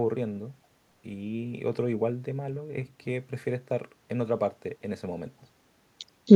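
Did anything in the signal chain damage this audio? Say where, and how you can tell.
Yes. Echo leak, from 6.27 s to the end at 6.36 s: a very faint delayed copy of the speech, far below the main level, trails it by 266 ms. This points to call processing, likely a far-end echo canceller letting loudspeaker pickup through.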